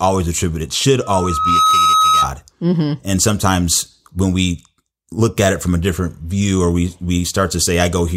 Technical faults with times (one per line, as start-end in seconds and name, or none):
1.02-2.34 loudspeaker feedback squeal